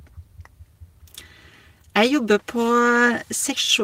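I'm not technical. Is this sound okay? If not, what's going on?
Yes, nothing is wrong with this sound. Listening all the way through, I don't hear any problem at any point.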